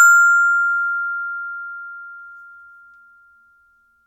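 Nothing stood out as a technical problem on listening to these everyday sounds.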